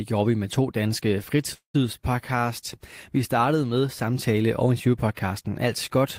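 From 1.53 s to 1.76 s the speech stalls in a call audio freeze. The last sound is held as a fading buzz or hiss, then about 110 ms of silence, and the speech resumes where it stopped. Packets were likely delayed until the jitter buffer ran empty, so 208 ms was inserted and nothing lost.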